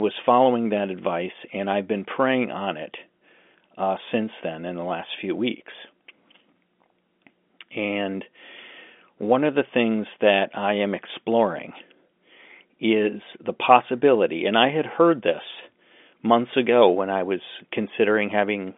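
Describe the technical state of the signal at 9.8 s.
At 9.8 s the audio is intact, with the speech carried through its ordinary telephone-band path and no fault present at that moment.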